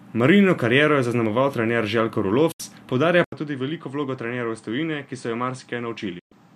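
At 2.51 s the speech cuts out in a digital broadcast dropout lasting until 2.60 s. About 72 ms of audio is missing, consistent with roughly three lost frames, and the receiver mutes with an 8 ms fade rather than a hard edge. On the waveform this is a brief flat gap with tapered sides. On a spectrogram it is a clean vertical blank stripe across all frequencies.

From 3.24 s the sound changes character. After an 80 ms silence it returns duller and somewhat quieter, roughly 5 dB down, with a new noise floor sitting roughly 40 dB below the speech. Nothing is present above 9.4 kHz. The likely cause is an input switched to a poorer device. A spectrogram shows the upper band abruptly emptying and a faint, even noise haze appearing. The waveform shows a short gap followed by a lower envelope.

A second dropout runs from 6.19 to 6.32 s, with 120 ms lost, consistent with about five frames, and the same 8 ms fade. 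It appears as a wider blank column than the first.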